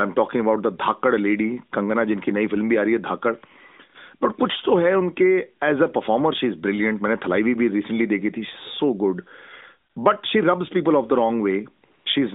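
AMR comfort noise appears at 9.90 to 9.96 s and again at 11.86 to 12.06 s: the phone judged the sound silent and sent no speech frames for 60 ms, then 200 ms, so the receiver substituted smooth synthetic noise, briefly replacing the real background within the 200 Hz to 3.7 kHz narrowband line.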